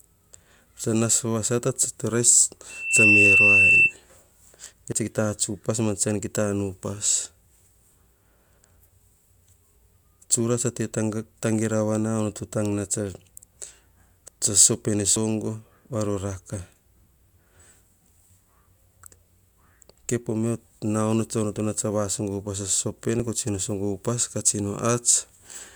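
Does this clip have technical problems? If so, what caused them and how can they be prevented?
Yes. From 2.69 to 3.94 s a 2.7 kHz tone swells over roughly a third of a second into a squeal about 10 dB above the speech. This is loudspeaker feedback squeal: the microphone picks up its own loudspeaker, and at that frequency the loop gain exceeds one. Lower the monitor gain, move the microphone away from the speaker, or notch 2.7 kHz.

At 4.92, 15.16 and 23.20 s the speech jumps ahead with no gap, losing around 20 ms, then 50 ms, then 20 ms. The likely cause is a dropped buffer (overrun), where the recording software fell behind and the hardware overwrote samples before they were read. Use a larger buffer and reduce the CPU load while recording.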